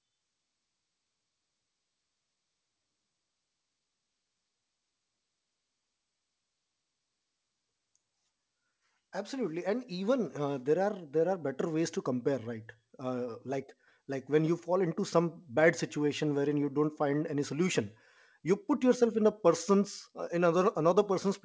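Nothing's wrong with this speech clip; it came through a call link whose codec tops out around 8 kHz, which is just how that path sounds rather than a fault.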